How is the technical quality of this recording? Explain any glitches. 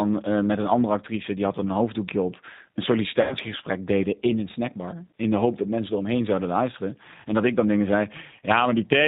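The technical quality is limited: the speech is carried through a narrowband low-bitrate codec throughout, and there is one brief dropout a third of the way in.

G.729 codec, throughout the clip. The speech is rebuilt from a vocal tract filter, a pitch predictor and a few pulses per 5 ms subframe rather than sent as a waveform. The sound points to the G.729A variant at around 8 kbit/s. Nothing above 4 kHz survives, so the speech sounds dull and boxy, and the coding damage is plainly audible as a rough, slightly synthetic texture.

VoIP packet loss concealed by the speech codec, from 3.21 to 3.34 s, between "een hoofddoekje op een" and "deden in een snackbar". About 100 ms of audio is missing, which fits five lost 20 ms packets. The decoder filled the gap by repeating its last pitch and filter settings with falling gain, so the speech smears into a fading buzzy tone or coloured noise. Because each frame depends on the previous one, the speech stays weak for a moment after the gap.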